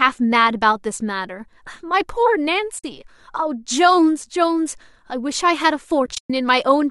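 At 2.79 s the speech drops into a brief, soft-edged silence lasting about 50 ms. This is AAC frame loss with muting: the decoder zeroed the missing frames, and the overlapping windows fade the sound out and back in rather than cutting it. That smooth ramp distinguishes it from a hard dropout. From 6.06 s to 6.30 s the losses come back, scattered across 240 ms, with the longest gap around a tenth of a second. The hole lengths fit short frames of about 10 ms, likely from low-delay AAC-ELD coding.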